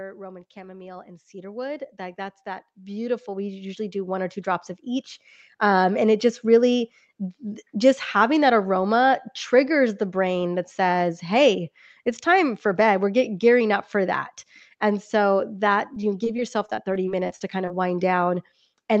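From 0.53 s to 7.54 s, the automatic gain is rising. The control judged the input too quiet and kept lifting its gain. The total climb is about 18 dB. The speech and the room noise swell together, slowly, over those seven seconds. Nothing in the sound itself gets louder. It is the level being pushed up. The rise ends just before "just having that aroma."

Right after "so that," from 15.94 s to 17.70 s, there is repeated packet loss with a robotic sound. Audio keeps dropping out in short holes, the longest about 23 ms. Each hole is patched by stretching the last bit of sound. About 210 ms is filled this way, roughly 12% of the stretch. The speech turns choppy. Small pieces are missing.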